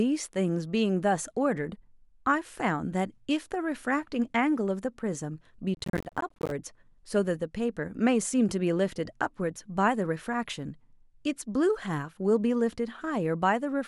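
From 5.75 to 6.51 s the speech breaks into a burst of gritty crackle, processor overload crackle. The processor repeatedly misses its deadlines for short buffers of around 10 ms, and roughly forty are dropped as tiny hard-edged silences. Together they tear the sound until the load clears.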